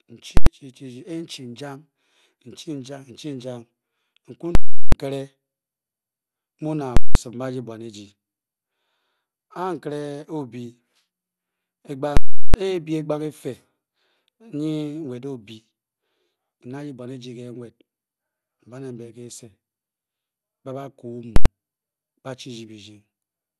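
Speech that sounds dull throughout, with upper frequencies coming and going and a gurgling, granular roughness, is likely the work of MP2 compression at a starved bitrate, which fits roughly 80 kbps, where whole upper sub-bands shut off and the rest are coarsely quantised. Five times a very loud pop is followed by silence and then another pop: at 0.37–0.46 s, 4.55–4.92 s, 6.97–7.15 s, 12.17–12.54 s and 21.36–21.46 s. These are invalid numbers at full scale, where a calculation produced invalid values that pinned the output to its extreme for a whole block. The durations of about 93, 186 and 372 ms fit blocks of 4096, 8192 and 16384 samples.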